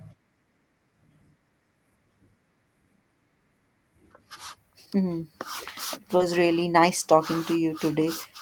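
At 6.17 s a short concealed packet loss occurs: about 20 ms of audio failed to arrive in time, and the receiver bridged roughly 22 ms by extending the preceding sound before blending back, heard as a brief smear or wobble lasting until 6.22 s. Overlapping it from 6.20 to 6.22 s, a lost packet rebuilt from error correction fills a 20 ms stretch using the low-bitrate redundant copy carried in the next packet. That frame comes through rougher and noisier than its surroundings. The call path's Opus coding, band-limited at 12 kHz and consistent with a rate around 32 kbps, underlies both events.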